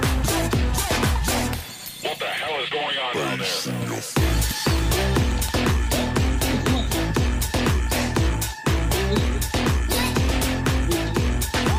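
Nothing in the audio stood out as a technical problem on listening.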